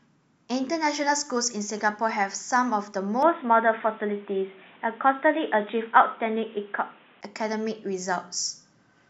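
From 3.23 s to 7.21 s the speech turns dull and boxy, losing everything above 3.8 kHz, with a faint new noise floor and no gap or level jump at either edge. The likely cause is an input switched to a poorer device, then back.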